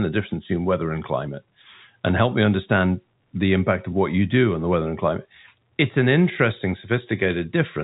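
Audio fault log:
Nothing stood out on listening to this speech, which comes through the expected telephone band of G.711 coding.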